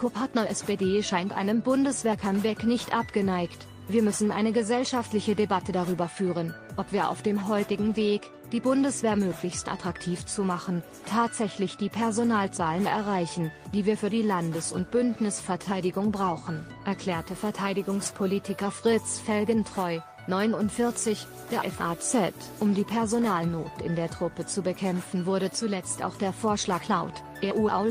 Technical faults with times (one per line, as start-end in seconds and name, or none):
20.75-22.66 low bit depth with dither